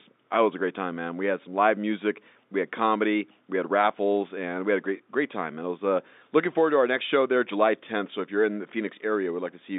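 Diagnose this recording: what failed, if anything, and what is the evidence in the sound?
Nothing stood out on listening to this telephone-band speech; no stage of the chain showed a failure.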